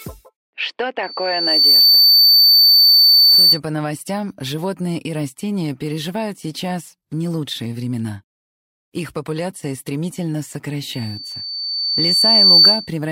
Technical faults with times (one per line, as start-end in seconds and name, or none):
1.03-3.60 loudspeaker feedback squeal
10.93-12.91 loudspeaker feedback squeal